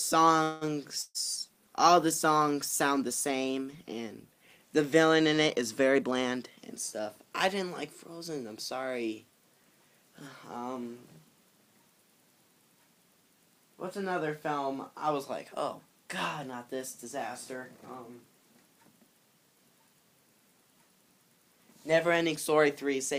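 From 0.43 to 0.75 s the sound stalls. The last moment is stretched into a fading buzz for about 178 ms, then resumes where it stopped with nothing lost. This is likely a call audio freeze, with delayed packets draining the jitter buffer. A spectrogram shows smeared horizontal bands.

At 1.02 to 1.18 s comes a burst of packet loss. About 120 ms of audio is gone. The receiver extends the previous sound, decaying it to roughly 20 ms of silence, then jumps ahead. The waveform shows a tapering envelope, a brief flat stretch, then an abrupt restart.

From 1.38 to 4.68 s a call bitrate drop takes the encoder from 128 to 25 kbps, and it stays at the lowest rate for about 3.2 s. The sound turns muffled and watery. On a spectrogram the upper frequencies vanish above a hard ceiling, and the remaining energy looks blotchy and coarse.

Two jitter buffer speed-ups follow. The receiver trims pitch-period slices to shrink excess buffered delay. 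From 5.95 to 6.58 s playback runs 18% fast, removing around a tenth of a second. From 6.99 to 8.29 s it runs 5% fast, removing a shorter amount. Pitch holds, but the sound feels hurried. Repeating cycles in the waveform are slightly compressed in time.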